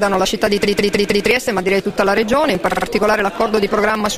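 A steady ticking runs from 0.09 s to 4.11 s, one tick every 54 ms (about 18 per second), about 70 in all. These are periodic USB or driver dropouts: something blocks the audio path at a fixed interval, and roughly 10 ms of sound is skipped outright each time.

From 0.64 s to 1.27 s the audio stutters, with a 156.7 ms block replaying four extra times. At 2.71 s a 52.2 ms block replays three extra times. These are repeated frames: the same compressed frames are decoded again, adding about 0.63 s and 0.16 s.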